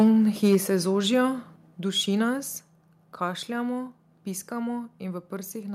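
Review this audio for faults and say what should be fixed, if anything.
Microphone overload occurs at 0.00 to 0.08 s and 0.44 to 0.57 s, where speech peaks go about 3 dB and about 4 dB past full scale, adding a harsh, crackly edge. The likely cause is input gain set so high that the converter's ceiling flattens the waveform tops. A noticeable share of samples, around a sixth in the first burst and fewer in the second, sit pinned flat at the rails. On a spectrogram these moments show broadband vertical smearing. Setting the input gain so the loudest speech peaks several dB below full scale prevents this.

Microphone volume stepped down three times, with single sudden level drops at 0.55 s (about 2 dB), 1.56 s (about 4 dB) and 2.58 s (about 3 dB). Voice and background fall together. The first drop follows the clipped peak, which points to software likely lowering the device's input volume in reaction to overload. 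On a waveform each step appears as an abrupt narrowing of the envelope, and a spectrogram shows the whole band darkening at once. Disabling automatic input gain control and fixing the level manually prevents these steps.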